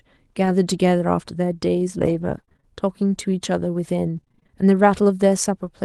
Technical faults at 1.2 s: none

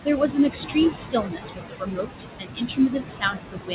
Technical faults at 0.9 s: noise suppressor artifacts; pre-emphasis left on

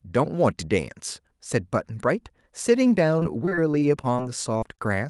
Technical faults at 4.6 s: short concealed packet loss

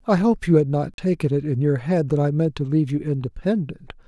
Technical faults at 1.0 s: block of digital silence

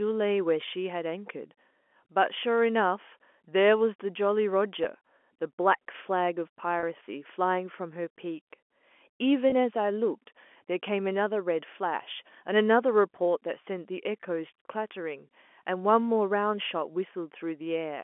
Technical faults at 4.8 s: packet loss with pitch repetition

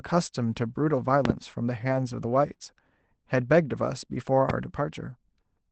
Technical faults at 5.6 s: none

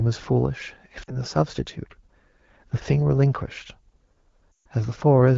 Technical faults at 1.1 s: lost AMR speech frames

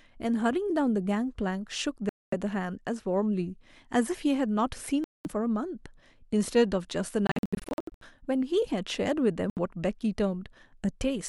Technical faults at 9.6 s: Bluetooth dropout

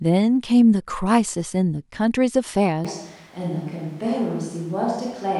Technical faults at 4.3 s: switch to a distant microphone

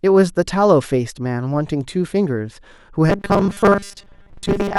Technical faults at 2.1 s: none

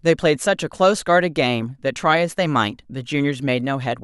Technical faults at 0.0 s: none

